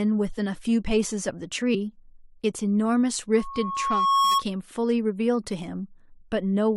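Speech with two spots where the audio jumps ahead, at 0.37 to 0.39 s (about 20 ms lost) and at 1.74 s (about 40 ms lost). These are compressed frames skipped: whole coded frames went missing or were rejected. From 3.34 to 4.43 s a single 1.1 kHz tone swells over about a second to roughly 5 dB above the speech. This is a loudspeaker feedback squeal, where the microphone hears its own loudspeaker and loop gain exceeds one at that frequency.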